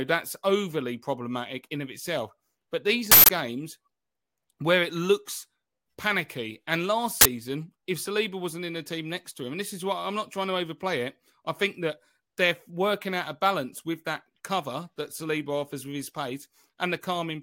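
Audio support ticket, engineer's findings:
Loud, harsh bursts of digital noise at 3.12–3.29 s (about 170 ms) and 7.21–7.25 s (about 43 ms). Uninitialised buffer: playback read blocks before audio was written, so stale memory came out as samples. Burst lengths fit 8192- and 2048-sample blocks.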